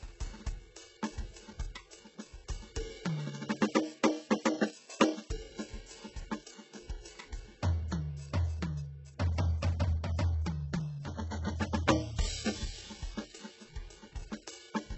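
From start to finish the music sounds heavily smeared, with gritty, metallic treble that stops dead at about 8 kHz. That fits likely HE-AAC compression at a very low bitrate, around 8 kbps, where copied-up bands stand in for the real highs and their harmonics no longer line up.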